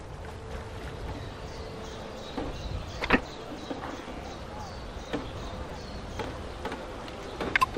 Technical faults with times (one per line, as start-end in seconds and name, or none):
2.59 repeated buffer
5.70 repeated buffer